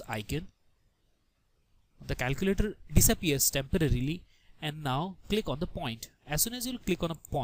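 No technical faults are audible anywhere in this recording.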